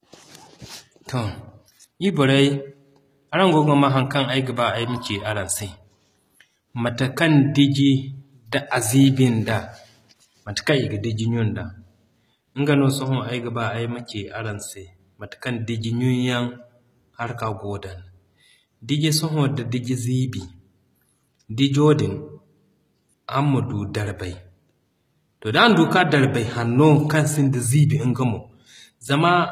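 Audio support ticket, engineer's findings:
Symptom: gritty, metallic sibilants and a synthetic-sounding top end, whole clip. No content above 14.9 kHz. Coding damage plainly audible throughout the speech. Probable component: likely HE-AAC compression, at a rate that fits roughly 20 kbps. Mechanism: only the lower band is coded. The treble is rebuilt by copying lower bands upward under a coarse envelope. Harmonics misalign at the crossover.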